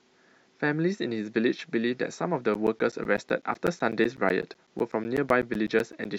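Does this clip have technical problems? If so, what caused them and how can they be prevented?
Yes. From 2.54 s to 6.05 s, periodic USB or driver dropouts tick every 0.125 s, around thirty in all. Something blocks the bus or driver each time. Roughly 10 ms of speech is replaced by silence. Prevent it by disabling the interfering background task or moving the interface to another USB controller.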